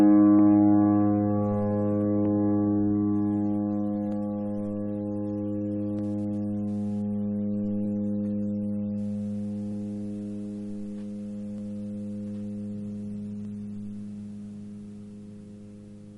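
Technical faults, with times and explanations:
0.39 to 15.32 s, clock drift buffer slips: a click or pop recurs at an even 1.87 s spacing across the sound, about ten in all. The steady rhythm likely comes from two devices running on separate clocks that disagree by roughly 200 parts per million. The buffer between them creeps until a short block of around fifteen samples is dropped or repeated, and each sudden jump in the waveform lands as a click.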